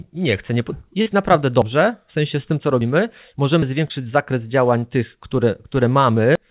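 Speech over a narrowband call path, with nothing above 4 kHz, carries brief smeared wobbles at 1.02–1.08 s, 3.88–3.92 s and 4.80–4.84 s. These are short concealed packet losses of about 40, 20 and 20 ms, where the receiver extended the preceding sound to fill the gap. Separately, abrupt jumps forward in the sound occur at 1.62, 2.81 and 3.62 s, each skipping a few hundredths of a second. A larger skip of roughly 150 ms comes at 6.35 s. These are likely dropped buffers (overrun), where unread audio was overwritten and the remaining edges were spliced together.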